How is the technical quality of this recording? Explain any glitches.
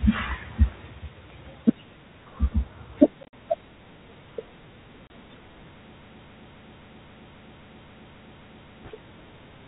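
The speech has two brief dropouts and one long stutter, heard through the narrow telephone band of G.726 ADPCM at 32 kbit/s, with nothing above 4 kHz.

At 3.23 to 3.33 s, and again at 5.07 to 5.10 s, the speech breaks into hard-edged silent holes and resumes slightly distorted. This is packet loss on an ADPCM call. About 80 ms drops out in scattered pieces across the first 100 ms, and 30 ms in the second. Afterwards the receiver's adaptive predictor briefly disagrees with the sender's.

From 5.97 to 8.85 s, a 266 ms fragment repeats exactly eleven times back to back, a broken-record loop. The likely cause is a stalled stream resending its last buffered piece, so the speech from that stretch is lost.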